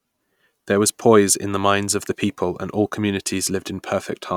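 Listening to this speech recording, nothing technical stood out.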